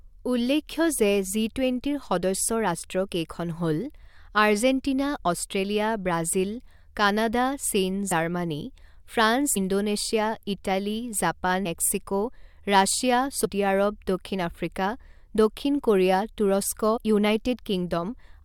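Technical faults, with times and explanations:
8.11 to 16.96 s, compressed frames skipped: at 8.11, 9.56, 11.65, 13.44 and 16.96 s the speech jumps forward, losing roughly 40, 150, 150, 100 and 70 ms. Those gaps look like whole compressed frames of about 21.3 ms that were missing or rejected as damaged, so between two and seven frames are dropped each time.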